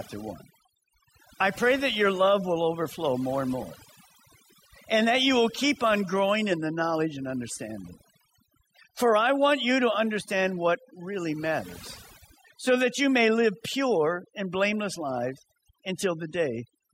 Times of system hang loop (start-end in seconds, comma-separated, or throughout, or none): none